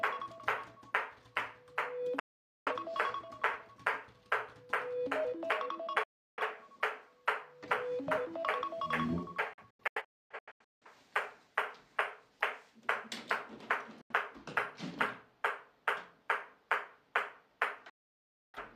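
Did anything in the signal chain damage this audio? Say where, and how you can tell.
Yes, a digital broadcast dropout at the reception stage: the sound mutes within about 3 ms at 2.19–2.72, 6.03–6.42, 9.53–10.87 (several short holes, longest 0.26 s), 14.01–14.13 and 17.90–18.59 s. Failed frames are silenced outright, not concealed or stretched as with network loss.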